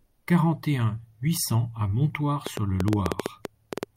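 A short speech recording with a train of clicks running from 2.47 to 3.84 s, just after "un huit cents à": around fifteen similar pops at an uneven pace of about 8.8 per second, sitting well above the speech, most likely from a faulty connection or nearby electrical interference.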